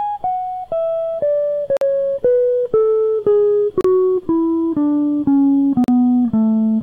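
At 1.77, 3.81 and 5.84 s the music drops into hard-edged silence for about 45, 35 and 40 ms: gaps between stream segments. These segments run about 2 s apart, and the player pads each timestamp gap with silence, leaving flat-line notches in the waveform and blank vertical stripes on the spectrogram.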